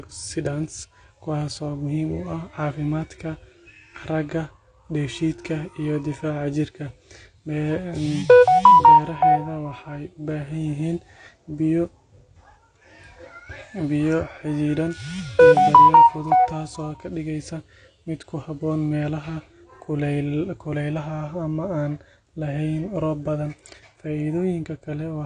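From start to finish the speech sounds dull and smeared, with nothing above about 9.7 kHz and a fizzy, warbling edge on sibilants. That's likely AAC compression, and the low cut-off and clear damage point to a low bitrate, around 32 kbps.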